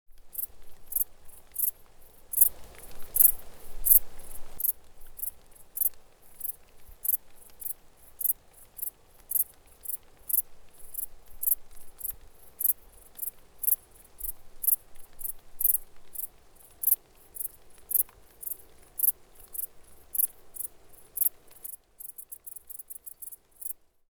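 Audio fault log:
2.39–4.57 s, sudden gain jump: a gain change likely applied without a ramp lifts the level by about 8 dB, so the sound and its background noise step up together, then drop back abruptly.
21.67–24.15 s, sudden gain jump: a likely unramped gain step cuts the level by about 7 dB through to the end, so the sound and noise floor fall together.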